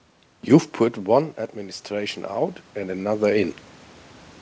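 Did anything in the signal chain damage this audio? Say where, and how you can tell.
Yes, at the call-processing stage: from 0.77 to 3.63 s, automatic gain rising lifts speech and room noise together by about 10 dB, visible as a slowly widening waveform envelope.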